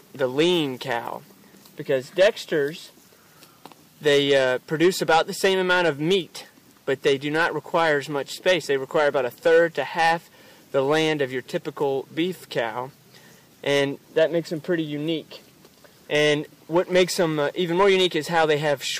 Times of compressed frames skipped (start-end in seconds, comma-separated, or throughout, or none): none